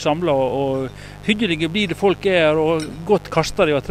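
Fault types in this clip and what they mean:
Mains buzz, throughout the clip: sharp switching spikes from something like a dimmer, a rectifier or an unshielded cable get into the signal path twice per cycle of the 50 Hz supply, so the interference arrives as a dense stack of 50 Hz harmonics extending well into the kilohertz range. It sits roughly 20 dB below the wanted sound and stays constant from start to finish, heard as a steady, raspy buzz rather than a smooth hum.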